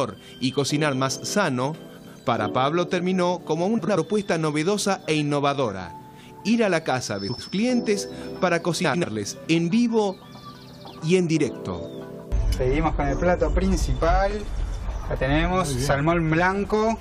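Frames out of order at 1.97, 3.78, 7.29, 8.84 and 14.48 s: each time, two adjacent blocks of about 93 ms, four frames each (which fits frames of roughly 23 ms), were decoded in swapped order. For about 0.2 s the sound jumps forward and then back, giving a garbled flutter. Nothing is dropped, so the timing after each swap stays intact.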